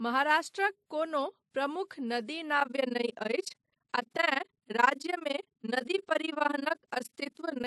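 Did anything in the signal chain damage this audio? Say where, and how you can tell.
Yes. At the codec stage, the speech carries two layers of compression artefacts at once, and the top end is cut off. That points to a low-rate MP3 later re-encoded as WMA. The likely cause is transcoding between lossy codecs, with the first encoder's cut-off kept.

In a frame-based processing stage, overlap-add ripple starts at 2.60 s, right after "महाराष्ट्रक कोनो प्रमुख नदी", and runs to the end. The level pumps about 20 times a second, dipping by about 60 dB. The frame overlaps don't sum to constant gain, giving a fast flutter.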